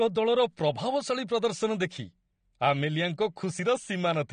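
From start to finish the speech carries plainly audible AAC compression, most likely from AAC-LC coding at a low bitrate, in a way that fits about 32 kb/s. Nothing survives above 9.7 kHz, so the sound is dull, and sibilants turn fizzy and smeared as the coder coarsely quantises its frequency lines to save bits. On a spectrogram this appears as a hard horizontal ceiling at 9.7 kHz.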